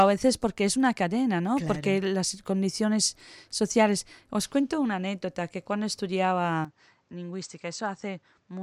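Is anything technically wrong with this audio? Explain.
Yes. At 6.65 s the sound changes character and stays that way to the end of the clip. The most likely cause is that the input switched to a poorer device partway through. Nothing above 8.2 kHz gets through after the change, so the speech turns duller. The level drops by roughly 10 dB. A new background noise appears, roughly 35 dB below the speech. There is no gap at the switch. The tone simply jumps from one moment to the next.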